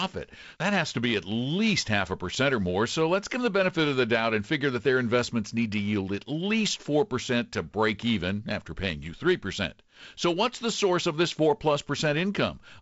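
No technical faults can be heard in this speech recording. The G.722 wideband telephone coding is running at 48 kbit/s, so the sound stops near 7.7 kHz and carries the light background hiss that coder leaves at that rate.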